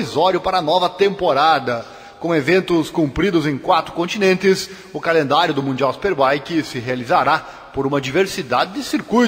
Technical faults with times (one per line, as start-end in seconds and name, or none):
0.00-9.27 sample clock jitter